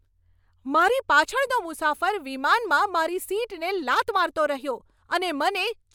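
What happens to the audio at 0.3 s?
Nothing goes wrong at 0.3 s; the speech plays through that moment intact, with no dropout, click, distortion or other fault.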